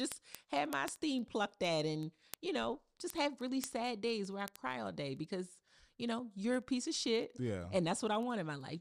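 A digital link feeds a receiver running on its own clock rather than locked to the sender, and the two clocks differ by a few hundred parts per million. From 0.12 s to 8.76 s they slip past each other about every 70 ms, each time misreading a sample or so and dropping or repeating one. The result is word clock ticks: around a hundred sharp clicks of uneven strength at a steady rate throughout the speech.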